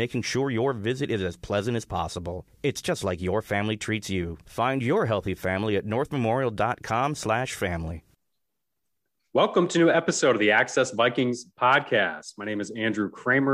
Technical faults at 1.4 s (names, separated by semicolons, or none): none